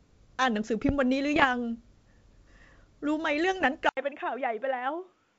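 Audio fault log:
1.34–1.46 s and 3.60–3.66 s, bit errors on an ADPCM link: flipped bits at a light error rate, well under a percent, throw off the decoder's step size and predictor, so each hit rings on as rough pops with brief level jumps. On a waveform these appear as jagged spikes, and on a spectrogram as short broadband smears.
3.89 s to end, input switched to a poorer device: an 80 ms gap, then the sound turns duller and boxy, about 5 dB quieter, with new background noise around 40 dB below the signal. The likely cause is a change to a narrower-band microphone. On a spectrogram, everything above 3.8 kHz vanishes, while the earlier G.722 band reached higher.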